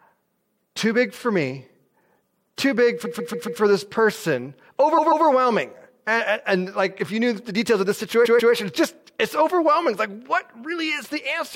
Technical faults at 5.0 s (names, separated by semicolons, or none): repeated frames